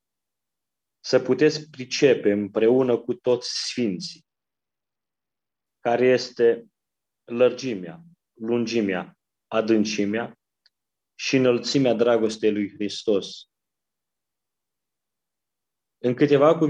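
From 3.26 to 5.66 s and again from 12.22 to 13.32 s the treble dulls and a gritty noise rises: a Bluetooth SBC bit pool drop, which fits the bit pool falling from 28 to 11, around 90 kbps. This starves the upper sub-bands and coarsens quantisation elsewhere.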